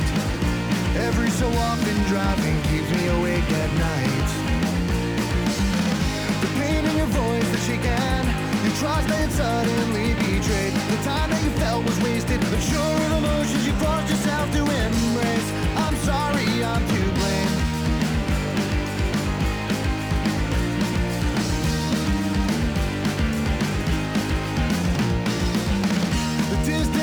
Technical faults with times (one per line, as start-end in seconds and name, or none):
0.00-27.03 crude rate conversion